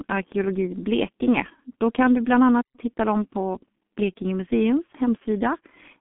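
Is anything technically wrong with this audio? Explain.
Yes, there are two faults.

G.723.1 codec, throughout: heavy low-rate coding near 6.3 kbit/s within a 150 Hz to 3.4 kHz band leaves the speech muffled and hoarse, with smeared consonants.

Playback stall, 2.62 to 2.76 s: after "kan du bland" the sound cuts to silence for about 120 ms, likely from the player running short of data, then resumes at "hitta dem på".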